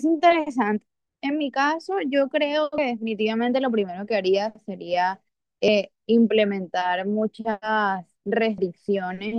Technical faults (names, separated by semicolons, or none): audio missing between chunks